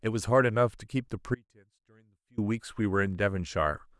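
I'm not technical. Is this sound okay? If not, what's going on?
No. At 1.35 s the speech cuts out abruptly and only returns at 2.38 s, so about a second is missing. This is an audio dropout to a faint residue: during the gap you can still hear a very quiet trace of the sound, far below its normal level, rather than true silence. The likely cause is a brief loss of the signal along the way while the rest of the recording chain stayed switched on.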